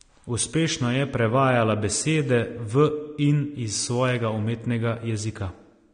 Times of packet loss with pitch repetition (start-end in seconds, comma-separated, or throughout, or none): none